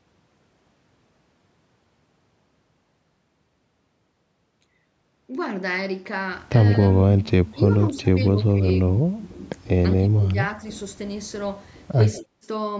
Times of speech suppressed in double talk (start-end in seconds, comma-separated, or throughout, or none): 7.17-8.07, 8.32-9.45, 9.97-10.36